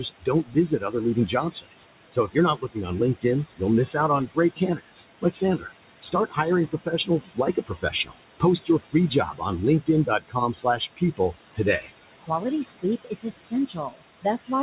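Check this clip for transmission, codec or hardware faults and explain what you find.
Two faults from the noise suppressor run through this speech clip. The band-limited sound, with nothing above 4 kHz, fits an ordinary G.711 mu-law call path, and the room noise sits about 12 dB below the speech.

Noise suppressor artifacts are present throughout. The background falls away in the pauses and swells back under the talking. The suppressor pulls down every band it judges to be steady noise, here by about 19 dB, frame by frame.

Speech cut by the noise suppressor occurs at 0.0–3.25 s, at 4.27–6.38 s just after "miss out on", at 6.71–9.43 s, 9.81–11.9 s and 12.22–14.6 s. Soft consonants and word endings sound swallowed or faint, dropping by up to about 20 dB, and within each of the first four stretches the affected parts add up to roughly half a second to a second. The suppressor mistook these quiet parts of the speech for noise and turned them down along with the background.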